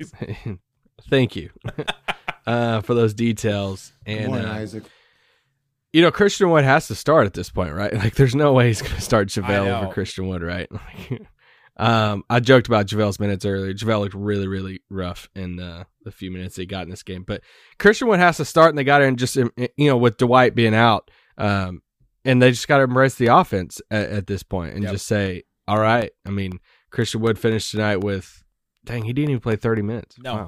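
From 23.3 s, just after "got to embrace the", to 30.3 s, periodic USB or driver dropouts occur. Every 0.25 s, well under a millisecond of speech is lost and replaced by silence. About thirty regular ticks result, audible only where speech is present.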